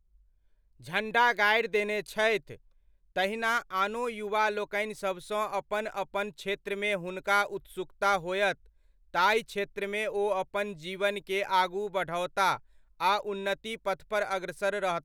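Nothing in this recording trips any alarm: no dropouts, glitches or other technical faults turn up anywhere along the way.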